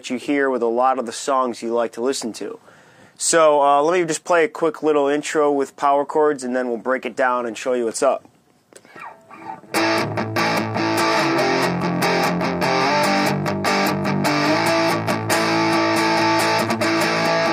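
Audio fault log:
No technical faults are audible anywhere in the recording, and the signal stays steady and intact throughout.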